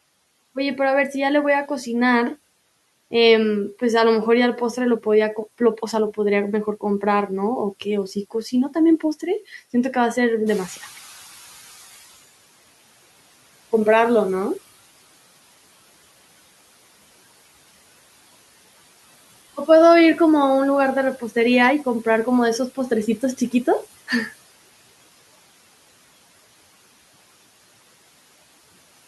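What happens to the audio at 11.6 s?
At 11.6 s the audio is inside a stretch of noise suppressor catching up, running from 10.46 to 12.28 s. The room noise jumps by about 11 dB at roughly 10.5 s, and the suppressor's estimate of the background takes about 1.8 s to follow. Until it does, the louder noise leaks through with less reduction and then settles as the cut returns to about 17 dB. On a spectrogram the broadband noise floor brightens sharply near 10.5 s and fades back over the next 1.8 s. The waveform shows a matching thickening of low-level noise that tapers off.

Noise suppressor artifacts are also present here, as they are across the whole clip. The suppressor lowers the bands it judges to be steady noise by about 17 dB, frame by frame. As a result, the background dips in the gaps between words and swells back under them. On a spectrogram this looks like patchy, flickering speckles in the noise regions rather than an even floor. 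In the waveform the quiet gaps pump up and down in level.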